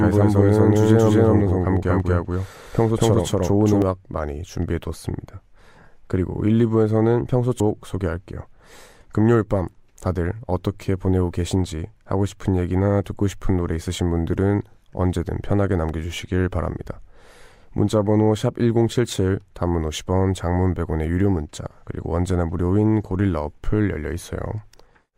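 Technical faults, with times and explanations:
0.00–3.82 s, doubled audio track: the speech is already doubled at the start. A copy at about equal level trails by roughly a fifth of a second, likely from a second capture path. Each onset appears twice on the waveform, and the copy ends abruptly at 3.82 s.
7.60 s, stream segment skipped: the speech jumps ahead with a small blip, likely because a failed stream segment was dropped. The spectrogram shows a thin broadband line where the waveform breaks.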